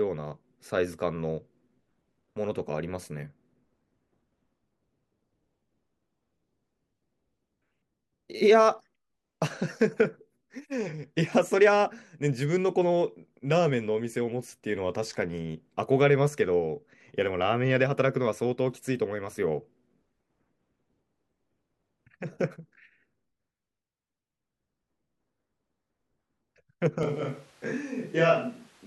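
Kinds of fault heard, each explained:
Switch to a distant microphone: at 27.03 s the speech turns suddenly roomy and hollow, with thinner bass, and stays that way to the end of the clip. The loudness barely changes, but the room noise now sits only about 30 dB below the speech, so more background noise comes through. This likely comes from the close microphone dropping out and the recording falling back on one placed further from the talker, picking up more of the room.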